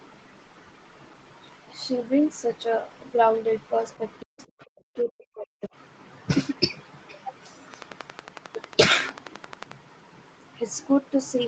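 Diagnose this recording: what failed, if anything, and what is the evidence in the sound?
Other side's voice leaking through at 4.2 to 4.44 s, faint, roughly 25 dB under the talker. That's call processing: the echo canceller likely left some loudspeaker pickup behind.

Speech suppressed in double talk at 4.23 to 4.38 s and 4.74 to 5.7 s, with the talker dropping by as much as 40 dB. Likely the canceller ducking everything while both sides talked.

A train of clicks from 7.74 to 9.73 s, about twenty evenly spaced ticks at 11.1 per second, peaking well above the sound. Likely interference on the analogue wiring or a faulty connection or power supply.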